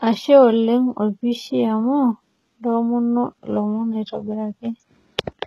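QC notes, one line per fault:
Throughout, HE-AAC compression: s sounds in the speech come out gritty and metallic, and the treble is unnatural, with nothing above 12.3 kHz. The likely cause is a heavy encode around 16 kbps that rebuilds the upper band from copied lower bands, so harmonics misalign.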